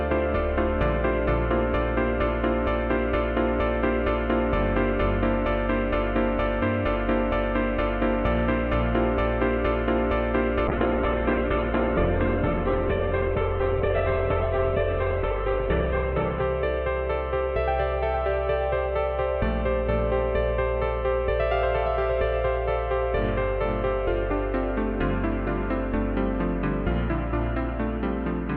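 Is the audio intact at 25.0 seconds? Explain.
Yes, the audio is intact at 25.0 seconds, with no fault present at that moment.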